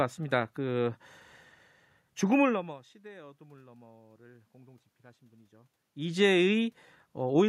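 No system faults in this speech recording: the steady background is room noise picked up at the microphone, and the level shifts near 2.5 s and 5.5 s are the talker moving relative to the mic.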